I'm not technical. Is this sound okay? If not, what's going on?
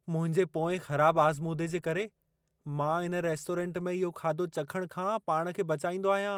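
Yes, this one's fine: nothing in the recording jumps out as a technical problem, so there's nothing you need to worry about here.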